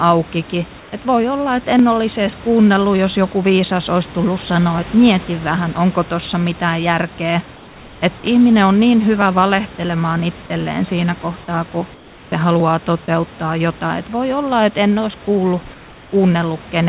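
At 0.8 to 0.92 s, 7.56 to 8.02 s, 11.94 to 12.32 s and 15.74 to 16.12 s the room background turns into comfort noise: a flat, featureless hiss about 2 to 3 dB quieter. That's likely discontinuous transmission swapping the real background for synthetic noise during pauses. Around 13.06 s there's sound dropped by the voice detector. A tiny sliver of sound, roughly 10 ms, gives way to that same steady noise, likely because the detector briefly mistook it for background.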